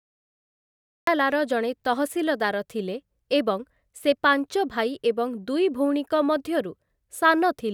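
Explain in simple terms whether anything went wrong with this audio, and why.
Something went wrong right at the start: the recording began late, a fault called a cut-off start. For the first 1.07 seconds there is nothing but dead digital silence, and then at 1.07 s the speech simply switches on partway through, with no natural rise or lead-in. Because the capture missed the true beginning, the first sound arrives already in progress, so it feels chopped rather than properly started.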